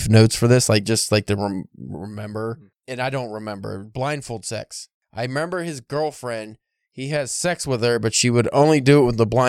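From 1.80 to 2.19 s, a gain reduction of around 10 dB is applied in discrete jumps instead of a continuous ramp, producing zipper noise. The level is updated roughly a hundred times a second with no smoothing between updates, so each jump leaves a tiny discontinuity in the waveform. Over that stretch the speech drops in level while a fine, rapid ticking buzz rides on top of it.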